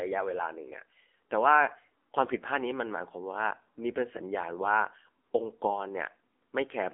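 Throughout, AMR narrowband mobile codec damage confines the speech to roughly 250 Hz–3.5 kHz with nothing above 3.6 kHz; heavy buzzy, synthetic coding fits a low bitrate near 6.7 kbps.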